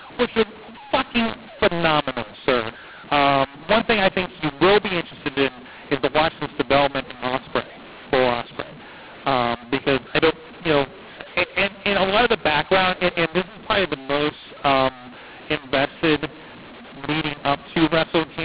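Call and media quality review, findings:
mu-law and A-law mixed up, whole clip. Harsh, distorted speech, levels scrambled, pauses filled with hiss. Telephone audio written as A-law, decoded as mu-law. Mismatched companding curve misreads each sample, lifting quiet ones off silence. 4 kHz G.711 band limit intact.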